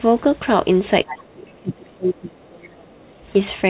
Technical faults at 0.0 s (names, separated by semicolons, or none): none